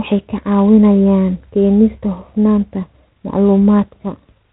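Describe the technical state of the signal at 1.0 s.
At 1.0 s the speech carries G.726 ADPCM coding damage, present across the whole clip rather than at one spot. The codec sends only a coarse difference between each sample and an adaptive prediction, and the plainly audible harsh, rasping hiss that rises and falls with the speech level fits the 24 kbit/s rate. A spectrogram would show a hard ceiling at 4 kHz and grainy noise filling the gaps between harmonics wherever the speech is loud.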